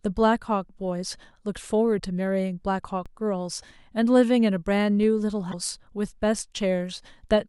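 At 1.98–2.01 s, 3.61–3.64 s and 5.51–5.54 s the speech skips forward with a brief glitch lasting about one 24 ms frame, likely a broken MP3 bit reservoir after lost frames. At 3.06 s and 5.03 s a DC step shifts the waveform's zero line, giving a low thump or click, and the offset then decays through a 20 Hz high-pass.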